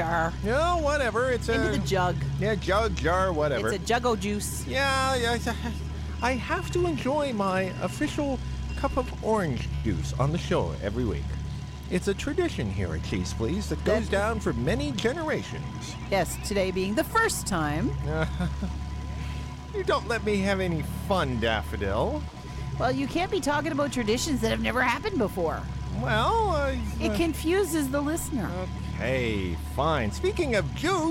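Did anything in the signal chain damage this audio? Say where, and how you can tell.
Yes, at the network stage: a short stall from a late packet at 9.75 to 9.86 s. The sound is held for about 84 ms with a slight buzz or dip, then resumes exactly where it stopped, so the delay grows by 84 ms. Unlike packet loss, nothing is skipped.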